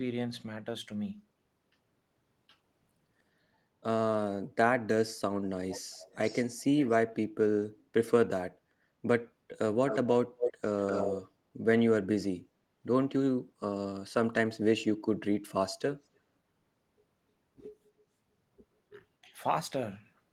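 From 5.7 to 6.6 s and 6.77 to 6.97 s, a faint copy of the speech trails by 362 ms, about 20 dB down. This is echo leak, likely from a loudspeaker echo the canceller missed.

At 7.79 to 7.92 s, the room sound dips by about 7 dB for a moment. That is background gated by the echo canceller.

The echo leak returns at 9.88 to 9.98 s, 10.38 to 10.53 s and 10.82 to 11.16 s. The delay is now 245 ms, and the copy reaches near speech level.

At 19.21 to 19.31 s, the speech drops by roughly 20 dB for a brief moment. This is speech suppressed in double talk, likely while the far side was also talking.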